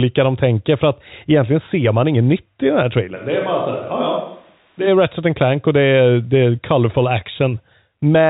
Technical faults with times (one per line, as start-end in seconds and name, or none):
3.17-4.86 switch to a distant microphone